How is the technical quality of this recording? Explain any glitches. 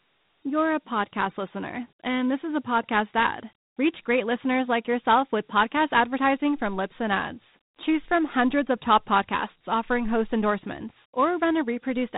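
The technical quality is limited by one fault that runs through the whole clip.

Dialogic VOX ADPCM, throughout: the speech was stored with 4-bit adaptive differential coding. Each sample keeps only a coarse step relative to the last, with 12-bit precision. Nothing remains above 3.9 kHz, which fits a rate of 8,000 samples a second and 32 kbps. The damage is plainly audible: a narrow, telephone-like band with a hiss that rides along with the speech.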